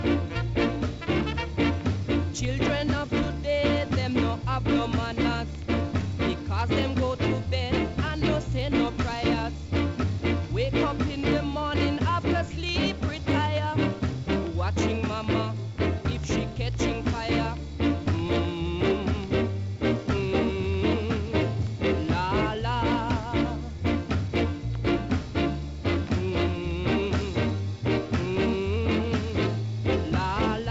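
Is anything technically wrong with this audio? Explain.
Yes. A steady buzz at about 43.1 Hz runs through the whole clip, while tempo and pitch stay normal. This is a block size mismatch (truncated): one stage hands over longer blocks than the next stage takes in, and the tail of each block is discarded. The repeated cut at every block boundary produces the buzz, and its rate fits 1024-sample blocks. The sound is band-limited with nothing above 8 kHz, which fits the call codec it passed through.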